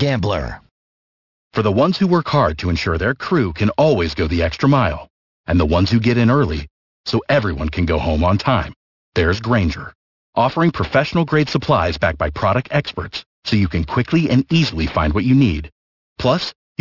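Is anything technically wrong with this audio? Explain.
Yes. The speech has aliasing from start to finish. The sample rate was reduced without a proper anti-aliasing filter first. The sound points to a drop from 48 kHz to 12 kHz. Everything above the 6 kHz fold point has mirrored back down into the audible band as false, unrelated tones. These folded components sit roughly 20 dB below the speech. Sibilants come out gritty and metallic, and the spectrum runs hard up to 6 kHz.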